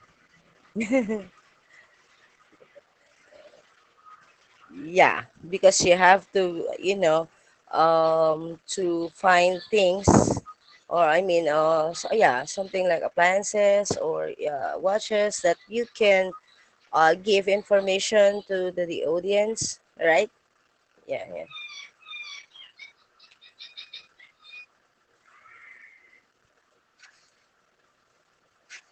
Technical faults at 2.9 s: Opus voice compression

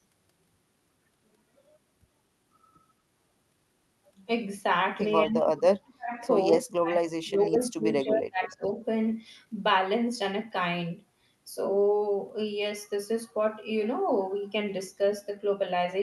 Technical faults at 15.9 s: none

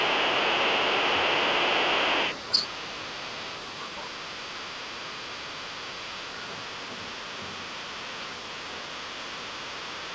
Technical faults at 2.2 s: other side's voice leaking through

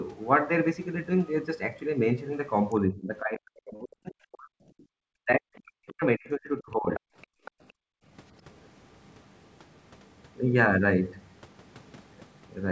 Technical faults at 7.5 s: background gated by the echo canceller; other side's voice leaking through

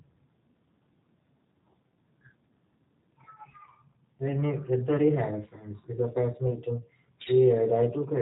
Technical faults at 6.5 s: G.729 codec; VoIP packet loss concealed by the speech codec

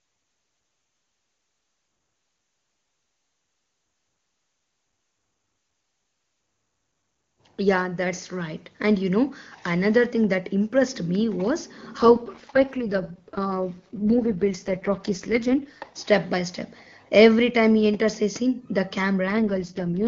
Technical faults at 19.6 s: AMR rate drop

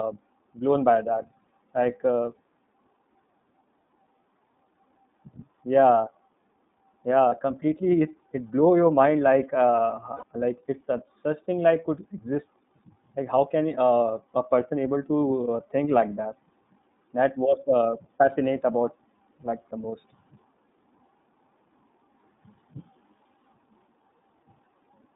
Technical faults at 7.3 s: iLBC codec; lost iLBC frames

